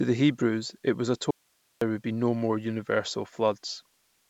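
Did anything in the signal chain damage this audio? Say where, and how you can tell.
Yes. An audio dropout to a faint residue runs from 1.31 s to 1.81 s. The speech cuts off abruptly for about half a second, and the gap holds only hiss, roughly 45 dB below the signal, before the speech snaps back. Because the path stayed live and carried its noise floor through the break, the signal was most likely lost through a transport or buffer interruption rather than a pause.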